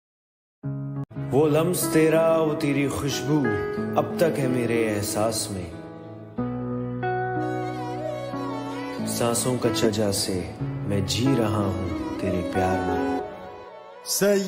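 Stream segment skipped at 9.84 to 9.87 s: the audio jumps abruptly forward with a brief blip, likely because one stream segment failed to load and playback resumed from the next.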